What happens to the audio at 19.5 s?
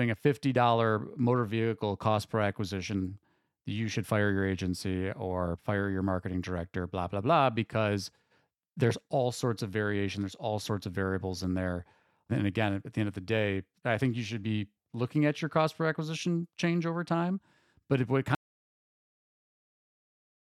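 At 19.5 s the speech is gone: an audio dropout to silence runs from 18.35 s to the end, silent with no room tone left, likely from a lost input signal.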